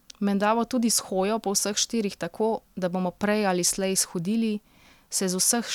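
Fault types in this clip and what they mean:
No audible faults are present.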